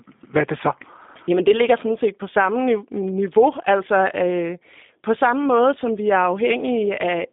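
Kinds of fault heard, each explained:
G.729 codec: a low-rate VoIP codec that rebuilds speech from a vocal tract filter, a pitch predictor and sparse pulses per frame. Here the speech sits in a 200 Hz to 3.6 kHz band and sounds plainly rough and synthetic, consistent with an 8 kbit/s stream.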